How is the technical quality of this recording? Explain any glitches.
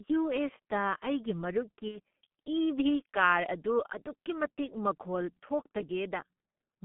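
Quality is poor: heavily coded telephone-band speech with one brief dropout.

G.723.1 codec, throughout: low-rate coding consistent with about 6 kbit/s leaves muffled, hoarse speech. The spectrogram shows nothing below 150 Hz or above 3.4 kHz, with smeared consonants.

VoIP packet loss concealed by the speech codec, 1.88–1.99 s: about 60 ms of data went missing. The decoder extended the previous sound with a decaying buzzy tone or coloured noise, visible as a fading, smeared stretch in the waveform.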